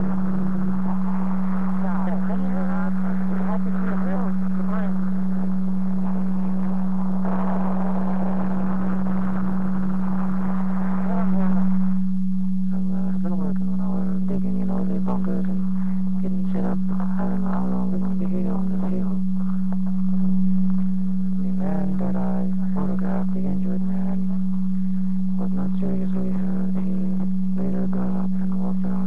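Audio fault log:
Throughout: overlap-add ripple. The audio was split into windowed frames and summed back with an overlap whose windows do not add up to a constant gain, so the level swings once per frame, around 200 times a second. The dips reach about 60 dB below the peaks, nearly silencing the signal each cycle. At that rate the swings merge into a harsh, metallic buzz with extra tones around each note instead of a countable flutter.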